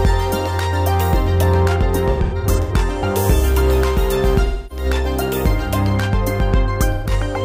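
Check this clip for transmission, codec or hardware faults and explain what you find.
AAC frame loss with concealment occurs three times. From 2.10 to 2.73 s, about 340 ms of audio is missing, scattered in patches, the longest about a tenth of a second. From 4.45 to 4.85 s, about 256 ms is lost, and from 6.92 to 7.12 s about 128 ms. Each time, the decoder rebuilds the gap from the last good spectrum. The sound turns smeared, noisy and phasey there, then recovers.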